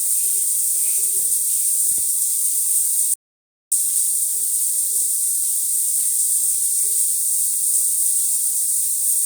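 From 3.14 to 3.72 s the input feed was likely lost while recording continued, writing silence: an audio dropout to silence. For about 580 ms the sound stops dead, with no room tone underneath, then resumes abruptly, and whatever occurred in that gap is missing.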